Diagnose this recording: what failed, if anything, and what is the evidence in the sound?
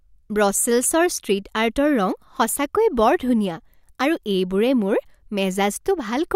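Nothing failed; no fault is audible anywhere in this recording.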